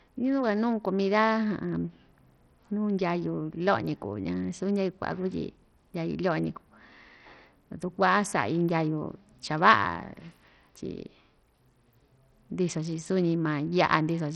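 Speech, and it's carrying heavy Bluetooth SBC compression the whole way through. There's nothing above 14 kHz, the top end flickers in and out, and a gritty, aliased grain rides on the sound. That's the likely cause: SBC splits the signal into a handful of wide bands and, when the bit pool is starved, the weak upper bands get little or nothing while the rest is quantised coarsely. The damage points to a low rate, around 64 kbps.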